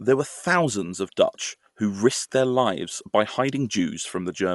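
From start to finish the speech sounds dull and rough, with nothing above 11.5 kHz and a fluttery noise edge. That's likely Dolby Digital compression, fitting a 64 kbps stream, where starved frequency lines get filled with noise instead of real detail.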